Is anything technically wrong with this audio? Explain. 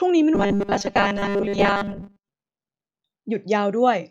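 Yes. Robotic sound from repeated short buffers runs from 0.35 to 2.29 s in this speech clip. The cause is likely audio arriving too seldom, so playback fills the gaps by looping the last short slice while fresh audio is skipped. For roughly 70% of that stretch the speech is replaced by repeats, and the fixed 200 Hz buzz they impose fits slices about 5 ms long. The voice becomes a rigid, metallic drone that only loosely tracks the words.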